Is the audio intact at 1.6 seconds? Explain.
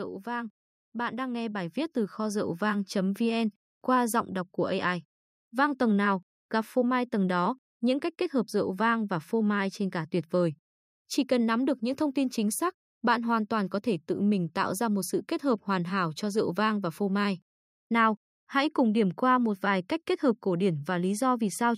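No. At 1.6 seconds the automatic gain is rising, from 0.24 to 2.7 s: the gain control ramps up about 8 dB, swelling voice and background together.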